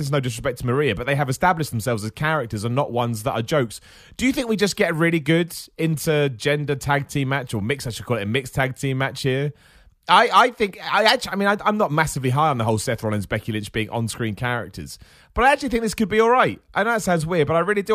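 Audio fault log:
No faults heard anywhere in this recording.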